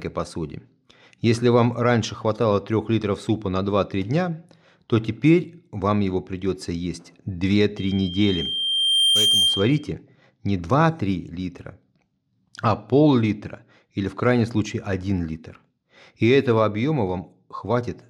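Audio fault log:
7.77 to 9.93 s, loudspeaker feedback squeal: a single 3.2 kHz tone creeps in under the speech and swells over roughly a second and a half until it's sitting about 5 dB above the talker, then drops out at 9.93 s. That's the mic hearing its own loudspeaker, and at 3.2 kHz the round trip picked up more gain than it lost, so that one frequency kept feeding itself until the loop got broken.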